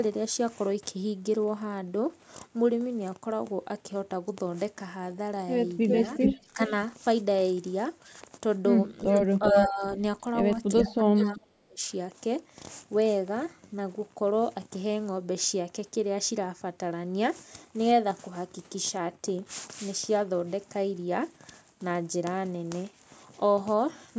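A speech recording with echo leak in five places: 5.88 to 6.4 s, 9.11 to 9.24 s, 9.43 to 9.65 s, 10.77 to 10.84 s and 11.18 to 11.4 s. A delayed copy of the talker returns 384 to 396 ms later, somewhere between level with the speech (9.43 s) and roughly 15 dB below it. The likely cause is a loudspeaker on the far end whose echo canceller let part of the microphone pickup through. Speech suppressed in double talk follows at 6.45 to 6.71 s, 9.25 to 9.83 s and 10.74 to 11.83 s. Here the talker's level dips by around 15 dB, and by as much as 30 dB in the last stretch, which affects roughly a second of speech. This is likely the canceller attenuating both voices when it could not separate the near talker from the echo.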